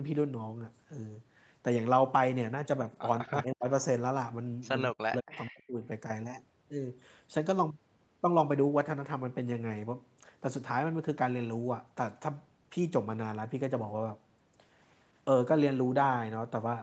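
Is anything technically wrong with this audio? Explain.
Yes. Speech dips sharply from 3.23 to 3.66 s and from 4.92 to 5.82 s, by up to about 40 dB. This is likely speech suppressed in double talk: the echo canceller treated overlapping speech as echo and turned it down.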